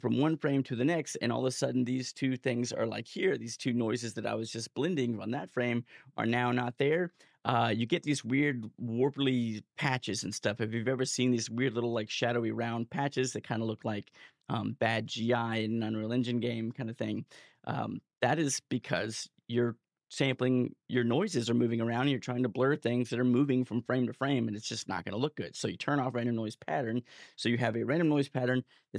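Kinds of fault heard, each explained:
No faults heard.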